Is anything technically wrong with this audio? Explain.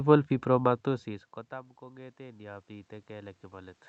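Yes. There is automatic gain rising from 0.84 s to 3.87 s. Around half a second in, the talker moves away and the level reaching the microphone drops by about 24 dB. The automatic gain control reads this as a quiet input and raises its gain by about 8 dB, gradually rather than in one step. Voice and room noise swell together over those three seconds, so the background grows along with the speech. The call codec's band limit, with nothing above about 8 kHz, can be heard throughout.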